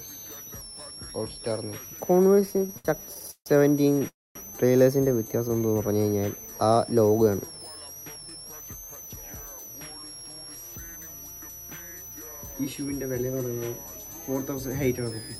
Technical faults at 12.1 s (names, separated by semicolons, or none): switching supply whistle